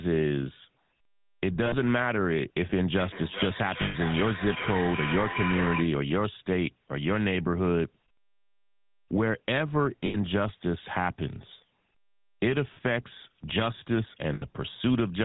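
Throughout, the speech carries the buzzy, gravelly roughness of the GSM full-rate codec. Nothing passes above 4 kHz, and the coarse pulse excitation is plainly audible.

At 1.66 s, lost GSM frames hold the last good sound as a rough, metallic ring for 60 ms.

From 2.95 to 6.01 s, a feedback echo between two devices appears. One device replays the other's microphone, which picks it up again. Repeats come about every 0.4 s, peaking about 5 dB below the speech.

Inside that stretch, at 3.82 s, another frame loss rings for 120 ms. More lost frames follow at 10.06 s for 80 ms, at 12.74 s for 20 ms, and at 14.34 s for 80 ms. Each is a brief metallic hold.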